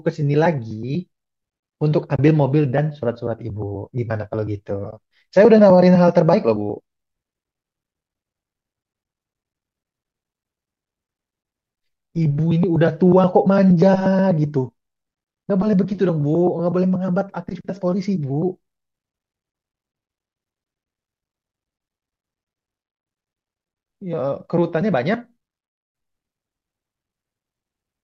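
Speech with two short soft-edged dropouts, at 2.16 to 2.19 s (30 ms) and 4.91 to 4.93 s (20 ms). This is AAC frame loss with muting: the audio likely passed through low-delay AAC coding with short frames of about 10 ms, which fits three lost frames in the first gap and two in the second. The decoder zeroed the missing spectrum, and the overlapping windows fade the sound out and back in rather than cutting it abruptly.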